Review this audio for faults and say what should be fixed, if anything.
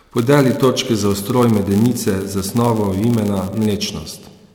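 A block size mismatch (padded) runs through the whole clip. One stage hands over blocks slightly shorter than the next stage expects, and the missing tail of each block is filled with zeros. Those tiny silent gaps recur about 91.5 times per second, producing a steady buzz at 91.5 Hz under the speech. The padding also stretches the timeline, so the speech plays at 0.996 times normal speed, about 0.4% slow, while the pitch stays essentially unchanged.

To prevent it, configure every stage in the chain to use the same block size, or buffer between them, so no block is ever padded.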